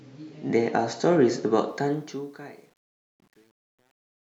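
From 1.69 s to the end, truncation distortion on a fade: the fade-out, undithered and consistent with a 9-bit stage, turns gritty from 2.2 s, unlike a clean, smooth fade.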